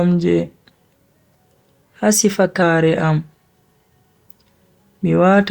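From 1.83 to 2.62 s speech jumps 6.4% faster and 107 cents sharp, then snaps back: one step, not wobble, likely a drift correction step.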